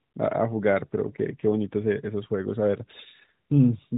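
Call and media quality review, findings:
No findings for this call and media quality review; nothing in the clip needs a ticket.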